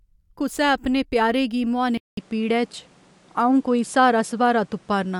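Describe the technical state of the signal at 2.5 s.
At 2.5 s you're in the stretch after what sounds like an input switched to a poorer device, running from 1.97 s to the end. Right at the switch there's a gap of about 200 ms, then the speech comes back duller, with nothing above 11.4 kHz, a level shift of roughly 5 dB, and a fresh noise floor sitting a fair way under the signal. The likely cause is the system swapping to a narrower-band microphone, with its own tone and noise.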